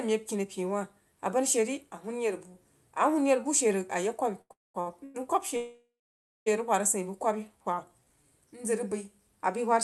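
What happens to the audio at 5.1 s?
From 5.04 to 5.16 s there is a call audio freeze: the last sound is stretched into a fading buzz or hiss for about 0.1 s, then the audio resumes where it stopped, now 102 ms later. The likely cause is delayed packets draining the jitter buffer. Nothing is lost.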